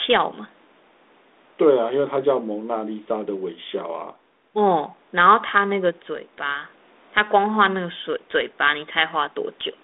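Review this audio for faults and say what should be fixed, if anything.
Nothing here needs fixing.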